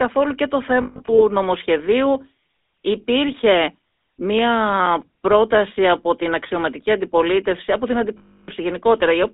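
Speech heard through a GSM full-rate codec throughout, confined to roughly 300 Hz to 3.7 kHz, with a buzzy, gravelly roughness that points to the 13 kbps pulse-excited coder rather than plain band-limiting. Lost GSM frames between 0.82 and 1.2 s appear as scattered metallic holds, the longest about 150 ms. From 8.18 to 8.49 s a continuous 300 ms loss rings, unlike a clean dropout. CD scratch ticks, eight of them from 4.39 to 5.49 s, are brief clicks, the longest about 5 ms, recurring at disc-rotation spacing, more regular than random digital clicks.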